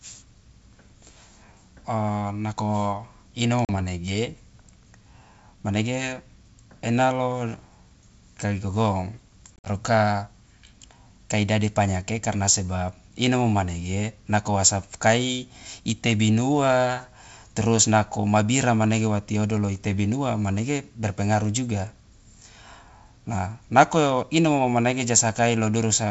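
A speech clip with packet loss on an ADPCM call: at 3.65–3.76 s, after "nako inomo", about 40 ms drops to hard-edged silence, and at 9.56–9.68 s, after "kai gogong", 80 ms vanishes in scattered gaps up to 50 ms. On a waveform these show as flat gaps, and on a spectrogram as blank vertical strips across the whole wideband range of the G.722 path. Each gap is followed by slight distortion that clears within tens of milliseconds as the decoder's predictor and step size slowly resynchronise with the sender's.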